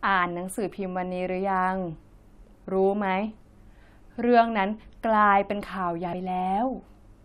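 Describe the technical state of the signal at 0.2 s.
At 0.2 s the speech signal is intact, with no audible fault at that moment.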